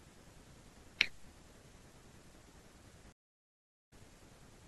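At 3.12 s the speech cuts out completely and stays silent for about 0.73 s, resuming at 3.93 s. This is a stream reconnect: the connection dropped, the player fell silent, then rejoined the stream with a freshly started decoder. What sets it apart from an ordinary dropout is the long, clean gap followed by a restart at a slightly later point. About 50 ms of speech is simply skipped rather than concealed or repeated.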